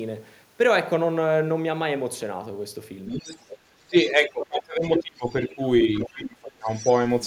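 From 3.08 to 3.58 s a second, fainter voice sits under the talker, about 10 dB below. This is the other side's voice leaking through, likely because the device plays the far end on a loudspeaker and the echo canceller left part of it in the microphone signal. Shorter scraps follow at 4.05 to 4.11 s (about 20 dB down) and 4.42 to 4.46 s (about 15 dB down). A stronger stretch runs from 4.86 to 5.55 s, only about 5 dB below the talker.

Across 3.87 to 5.59 s the talker's own voice dips and breaks up in pieces, adding up to roughly a second, with the deepest drops around 25 dB. This is speech suppressed in double talk: both sides were speaking at once, and the canceller, likely unable to tell its own talker from the echo, turned both down together.

The leak returns at 5.99 to 6.09 s, about 15 dB down. From 6.03 to 6.69 s the same suppression chops the talker again for roughly 0.7 s, with drops as deep as about 25 dB. 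From 6.66 s to the end, faint echo about 20 dB below the talker remains audible.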